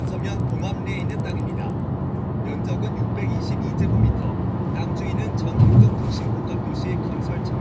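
From 0.0 to 1.8 s, a resampler restarted on every block. Each 100 ms block was converted alone, so its edges lacked true neighbouring samples. The result is faint ticks at a steady 10 per second, heard only while sound plays. This fits a 48 kHz to 16 kHz conversion.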